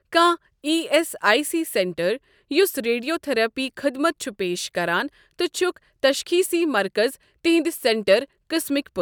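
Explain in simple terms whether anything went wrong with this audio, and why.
Nothing went wrong here: the speech runs along without any dropouts, glitches, distortion or other problems you'd notice.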